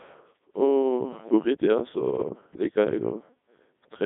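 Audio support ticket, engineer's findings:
Codec 2 vocoder across whole clip. Only pitch, voicing, energy and spectral envelope transmitted; decoder rebuilds speech from sine waves, waveform discarded. Result: robotic, buzzy speech, heavy damage, band roughly 150 Hz to 3.7 kHz, nothing above 3.8 kHz. Consistent with 3.2 kbit/s mode.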